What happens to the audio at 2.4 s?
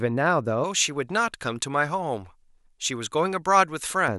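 At 2.4 s the speech is inside a stretch of pre-emphasis left on, from 0.64 to 4.08 s: the treble boost applied for transmission was never undone, leaving 10 kHz about 11 dB above 1 kHz, which fits a J.17 curve. The voice sounds thin, bright and sibilant.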